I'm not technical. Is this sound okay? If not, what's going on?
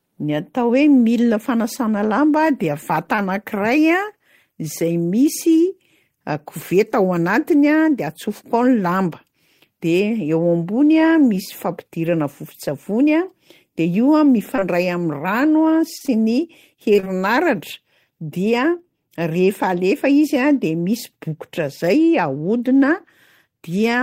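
No. The recording has two related problems, both caused by pieces of a call failing to arrive in time.

Short concealed packet loss: at 3.15 s, 14.56 to 14.64 s and 15.98 to 16.09 s, bits of sound lasting a few hundredths of a second went missing. The receiver patched each hole by stretching the sound just before it, then blended back in. You hear a quick smear or wobble, and a short sound can disappear entirely.

Repeated packet loss (robotic sound): from 16.93 to 17.20 s, several small holes arrive close together, the longest about 26 ms. Nearly half that stretch is patched-in sound rather than the real thing, so the speech turns choppy, with pieces missing.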